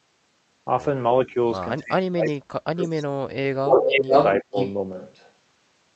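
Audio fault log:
1.25–1.37 s, 1.8–4.12 s, 4.43–4.56 s, speech suppressed in double talk: the echo canceller likely could not tell the near talker from the far side's echo while both spoke, so it turned everything down. The sound dips slightly at first, then drops by about 40 dB over roughly two seconds, and briefly by about 25 dB later.
2.25–2.33 s, 3.7–4.36 s, 4.55–4.74 s, echo leak: the far end's echo canceller likely failed to remove what its microphone picked up from the loudspeaker, so a delayed copy returns. It arrives 332 ms late and about 30 dB down at first, then 492 ms late, once about 5 dB above the direct sound and once about 10 dB below.
4.93 s to end, switch to a distant microphone: the close microphone's signal likely dropped out and a farther microphone took over. The sound suddenly turns roomy and hollow with thinner bass. The level stays about the same, and room noise rises to about 30 dB below the sound.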